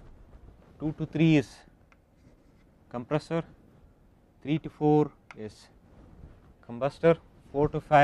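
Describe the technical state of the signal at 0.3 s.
At 0.3 s the signal is intact, with no dropout, click, distortion or other fault to be heard.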